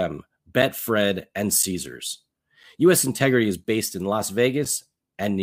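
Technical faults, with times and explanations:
0.62, 1.63, 2.63, 3.64 and 4.65 s: gap between chunks, about 7 ms of silence each second where 1-second chunks join, leaving little holes in the speech.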